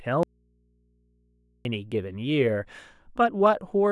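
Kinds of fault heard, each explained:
Audio dropout to a faint residue: from 0.23 s to 1.65 s the speech cuts out abruptly for about 1.42 s, and the gap is not silent but holds a low mains hum sitting roughly 40 dB below the normal level of the speech. The switch in and out is sudden, with no fade. The likely cause is a brief loss of the wanted signal while the path after the break stayed live, leaving the open input to pick up hum.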